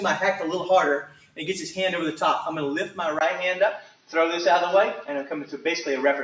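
Throughout the clip, a noise suppressor applied to music or sounds treats steady and sustained material as noise. Held parts and decays lose level while onsets pass, so the level swings by around 5 dB.

From 1.05 to 1.38 s the sound is cut by the noise suppressor, dropping by up to about 12 dB over roughly 0.3 s. Sustained portions sink or have their decay shortened, while sudden events come through.

At 3.19 s a 20 ms silence marks a change of character, likely from the input switched to a poorer device. From there to the end, the tone shifts, the level changes by around 5 dB and a new noise floor sits roughly 30 dB below the signal. Content reaches up to 8 kHz, as expected from call microphone processing.

From 3.82 to 4.12 s the suppressor cuts the sound again, by up to about 12 dB over roughly 0.3 s. Steady and fading material is pulled down while attacks remain.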